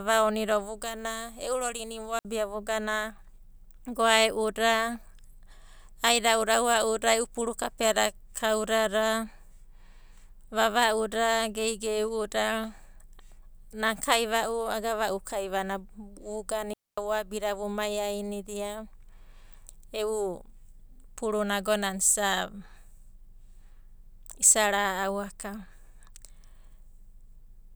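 At 2.19 s for 60 ms and from 16.73 to 16.98 s, digital wireless dropouts mute the speech into clean near-silence, with none of the noise bursts an analog dropout brings.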